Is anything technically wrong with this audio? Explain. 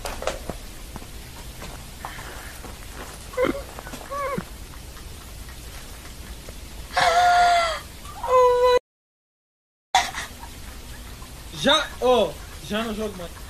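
Yes. There is an audio dropout to silence from 8.78 s to 9.95 s, roughly 1.1 seconds long. The sound cuts off mid-flow and resumes abruptly, and the gap is silent with no room tone at all. The likely cause is the input being lost, through a disconnect, a failed link or a mute, while the recorder kept writing silence. On a waveform this shows as a flat line, and on a spectrogram as a dark vertical band with hard edges.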